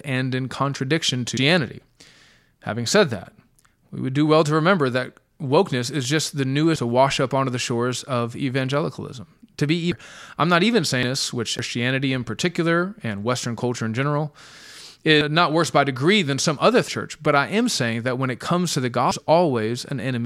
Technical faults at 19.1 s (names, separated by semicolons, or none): compressed frames skipped